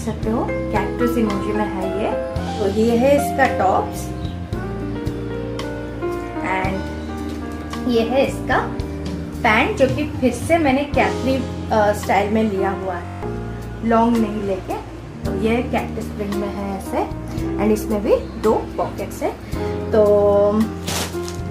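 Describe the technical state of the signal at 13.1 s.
A system hang loop runs from 13.06 to 13.23 s: the system froze while the hardware kept replaying one 21.33 ms buffer, which fits 1024 samples, eight times over. This produces a steady buzz at 46.9 Hz and drops roughly 150 ms of audio.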